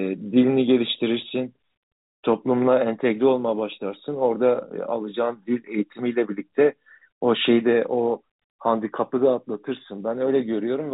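No technical faults are audible.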